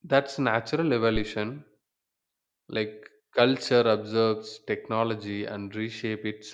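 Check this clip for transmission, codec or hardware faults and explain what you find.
One hardware fault shows up: a phantom power thump from 1.16 to 1.28 s. Switching the supply on or off on a live input sent a voltage step through the coupling capacitors. It sounds like a deep thud peaking at about −19 dBFS and dying away within 26 ms. The waveform shows a lopsided low-frequency swing, and the spectrogram shows a brief burst confined to the lowest band.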